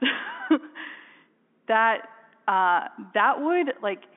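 No technical faults can be heard in this speech recording. It carries the sound of G.711 telephone coding, with the band confined to roughly 250 Hz to 3.4 kHz and nothing audible above 3.6 kHz.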